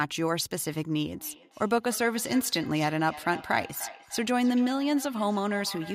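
Feedback echo between two devices runs from 1.13 s to the end of this speech clip, with each phrase returning roughly every third of a second and the strongest repeat about 16 dB below the direct sound. Two devices in the same room are joined to one call, so one device's microphone captures what the other plays out. Each echo canceller only subtracts its own device's playback, which leaves that loop untouched and lets the delayed copies keep arriving.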